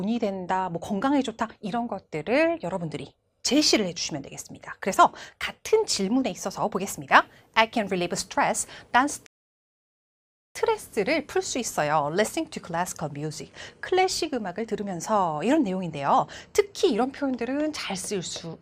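A rebuffering stall from 9.26 to 10.55 s: playback exhausts its downloaded audio, falls silent for about 1.3 s, then resumes exactly where it stopped, adding time.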